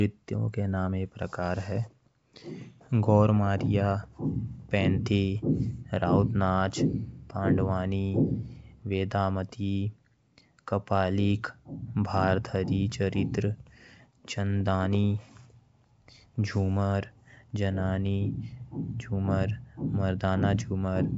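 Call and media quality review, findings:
No faults found: speech on a G.722 wideband path at 64 kbit/s, band-limited to about 7.8 kHz, coding damage faint at most.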